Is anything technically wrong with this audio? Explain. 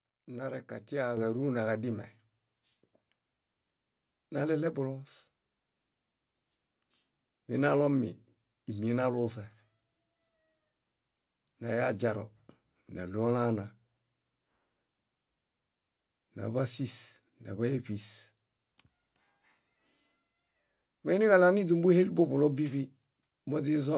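Yes. The microphone volume stepped up twice: at 1.17 s, just before "káruna kadime", by about 5 dB, and again at 2.19 s, just after "káruna kadime", by about 1 dB more. The call software judged the input too quiet and raised the device's capture gain in a single jump each time. Because the change happens at the microphone, the speech and the background noise both become louder at the same instant. The call-codec band limit, with nothing above 4 kHz, fits G.711 mu-law.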